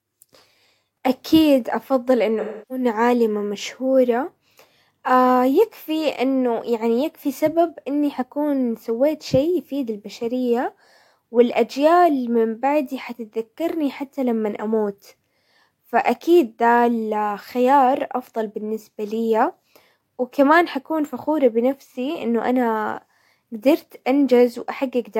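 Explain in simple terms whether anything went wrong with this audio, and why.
AAC frame loss with concealment: a stretch of coded speech went missing from 2.40 to 2.85 s. The decoder patched the gap from earlier sound, leaving a smeared, hollow blur.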